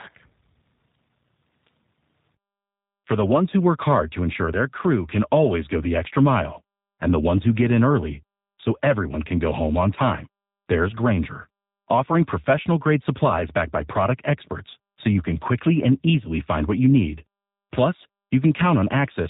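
From start to end the speech sounds slightly rough and synthetic, with nothing above about 3.8 kHz. That is G.729 codec damage, which fits an 8 kbit/s stream: each 10 ms frame is rebuilt from a vocal tract filter, pitch prediction and a few pulses.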